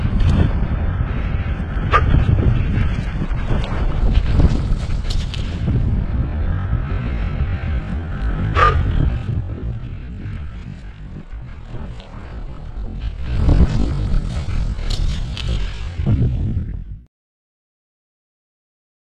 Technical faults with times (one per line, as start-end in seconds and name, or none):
0.00-4.00 adaptive stream starting at a low bitrate
8.72-9.60 zipper noise
13.08-13.44 zipper noise